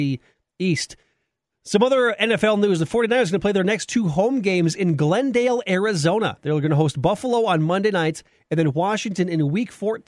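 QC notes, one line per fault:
No faults found in this clip.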